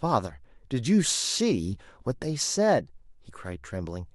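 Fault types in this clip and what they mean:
No faults can be heard.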